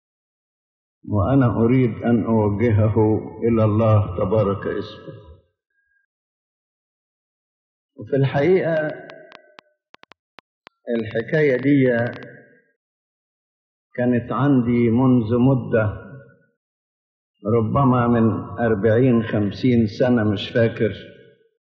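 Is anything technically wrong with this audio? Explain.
Yes. From 8.77 to 12.24 s there is a train of clicks: about thirty sharp ticks at roughly 7.5 per second, unevenly spaced and reaching about the level of the sound itself. Something is injecting repeated pulses, likely interference from nearby equipment or a faulty connection or power supply.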